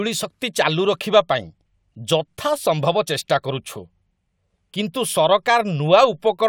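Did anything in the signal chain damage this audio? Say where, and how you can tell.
No, nothing in the signal chain can be heard damaging this speech at any stage from capture through to playback.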